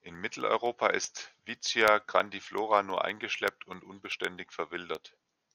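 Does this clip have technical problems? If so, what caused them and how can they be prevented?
Yes. Periodic USB or driver dropouts run from 0.08 s to 5.46 s, about every 64 ms: a tiny fraction of a millisecond is replaced by silence each time, giving a regular ticking through the speech. To prevent it, stop background tasks that stall the USB bus or audio driver, or use a larger buffer.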